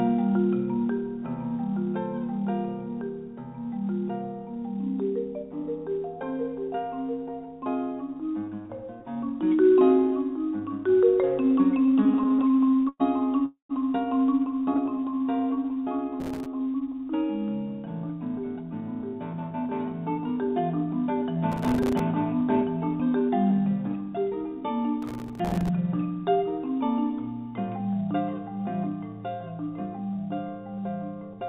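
Audio arriving over a call link, with nothing above 4 kHz on the spectrogram, which points to a narrowband G.711-style codec, shows several network and processing faults. From 11.86 to 13.02 s there are repeated stalls (stutter): twenty short gaps, the longest 109 ms, were filled by stretching the last sound because late packets drained the jitter buffer, showing as smeared, repeated columns. At 13.46 to 13.71 s a call audio freeze holds and fades the sound for 0.24 s, ending in about 0.11 s of silence. It appears as a flat band decaying to a blank strip, likely caused by packets held up in transit. A jitter buffer slow-down from 14.60 to 16.78 s plays the audio at 88% speed, adding 0.26 s by repeating pitch periods, so features look horizontally stretched at unchanged pitch. Four brief stutter gaps at 14.62 to 14.89 s sit inside it. Processor overload crackle appears at 16.20 to 16.46 s, 21.52 to 22.00 s and 25.02 to 25.69 s. 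Dozens of missed buffers of a few milliseconds each were dropped to silence, leaving thin vertical clicks and dropout slivers in the waveform. A jitter buffer speed-up from 18.57 to 24.38 s runs at 106% speed, trimming roughly 0.4 s of pitch periods to shrink excess delay, which compresses events in time.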